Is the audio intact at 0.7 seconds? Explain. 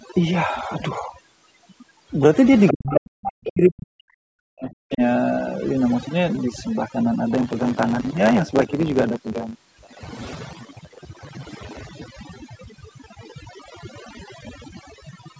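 No. At 0.7 s, as throughout the clip, overdone noise removal is audible: bands near the estimated noise floor are cut away, leaving a lowered background with twinkling specks. A spectrogram shows blank gaps scattered with isolated bright dots, and weak harmonics missing.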